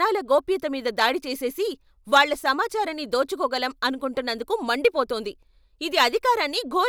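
A short burst of harsh crackle, grainy and edged, sits on the loud peaks from 2.14 to 2.22 s, just before "సమాచారాన్ని దోచుకోగలం అనుకుంటున్నందుకు". This is hard clipping. For that stretch the speech was driven about 6 dB past what a stage in the chain could pass, so the waveform's peaks were sliced flat. Those flattened tops add harmonics high in the spectrum, and that is the rasp heard on the peaks.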